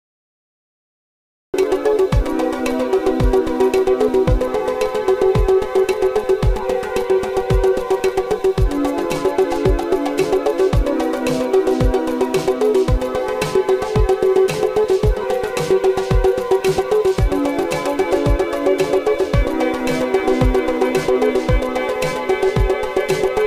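For the first 1.54 s there is dead digital silence, then the sound bursts in abruptly mid-event with no natural attack or fade-in. This is a cut-off start: capture or streaming began late, so the opening of the sound was never recorded.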